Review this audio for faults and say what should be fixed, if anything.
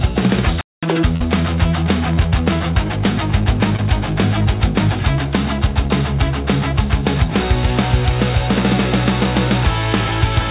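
A playback stall cuts the sound off at 0.61 s and leaves silence until 0.83 s, a gap of about 216 ms. The sound then resumes. The likely cause is the player's output buffer running dry or its audio thread being blocked, so nothing reached the device for that interval. To prevent it, run audio output on a high-priority thread and keep enough buffered data to cover scheduling delays.

Catch-up at higher speed follows directly, from 0.83 s to 1.04 s. The player works off the backlog at double speed by resampling, so the pitch also jumps by roughly ten semitones before snapping back to normal. To prevent it, recover lost time with a gentle rate change of a few percent, or with time-stretching that keeps the pitch unchanged.

Short concealed packet loss occurs twice: from 1.16 s to 1.22 s, where about 40 ms of audio was missing, and at 3.76 s, where about 20 ms was missing. In each case the receiver continued the preceding sound to bridge the hole and then blended back into the real signal. 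The result is a brief smear or wobble. To prevent it, reduce network loss and late arrivals, for example with a larger adaptive jitter buffer or forward error correction. The call path itself, G.711 mu-law with nothing above 4 kHz, which fits a 64 kbps stream, is band-limited as expected.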